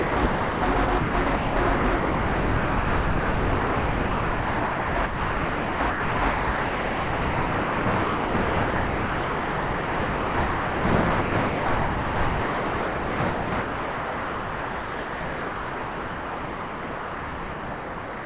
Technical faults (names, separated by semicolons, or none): sound chopped by the voice detector